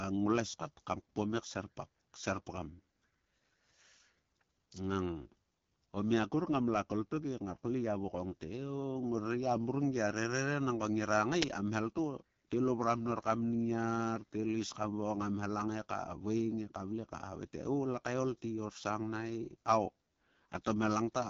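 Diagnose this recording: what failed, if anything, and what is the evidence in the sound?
The speech has a plainly audible rough, raspy grain throughout, with nothing above about 7.3 kHz. This points to the codec stage: AMR wideband (HD Voice) at a low rate, which fits 8.85 kbit/s, where the coarse pulse excitation can no longer model the voice cleanly.

At 11.42 s a very brief, loud crack appears, lasting about 5 ms. This is an uninitialised buffer at the driver or buffer stage: a block was played before audio was written into it, so stale memory was heard as samples.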